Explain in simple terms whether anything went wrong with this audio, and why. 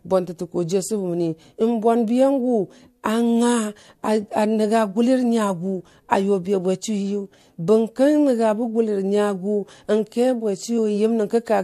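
Yes, one thing goes wrong, right near the end of this speech recording. At about 10.77 s there is a tiny glitch lasting roughly a hundredth of a second. That is damaged data in a compressed stream: part of the compressed file was spoiled, so the decoder misread that stretch and had to hunt for the next clean starting point. A plain dropout would be a brief silence.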